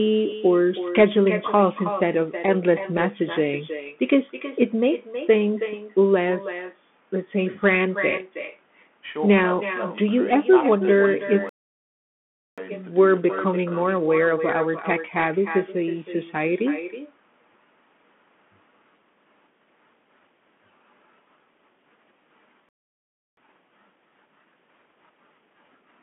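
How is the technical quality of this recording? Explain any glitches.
The quality is poor: the speech carries a constant echo and narrowband headset coding, and playback stalls twice, each followed by a hurried stretch.

Echo with no canceller runs throughout. The far end's loudspeaker feeds its microphone and nothing removes it, so every phrase returns roughly 300 ms later at about 13 dB below the speech, as a thinner shadow trailing the talker.

The Bluetooth CVSD headset codec is also present throughout. Its one-bit, adaptive-step coding, which fits a 64 kbps link, confines the speech to roughly 200 to 3400 Hz with nothing above 4 kHz. The damage is plainly audible: a muffled, phone-like tone, gritty sibilants and a granular hiss underneath.

A playback stall cuts the sound from 11.49 to 12.58 s, lasting about 1.08 s, and again from 22.69 to 23.37 s, lasting about 0.68 s. The output falls silent mid-flow, most likely because the player ran out of buffered data or its thread was blocked.

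Time-compressed catch-up follows each stall, from 12.58 to 15.58 s and from 23.37 s to the end. The player cuts and cross-fades small slices to clear its backlog, so the speech runs about 1.1 times faster at unchanged pitch.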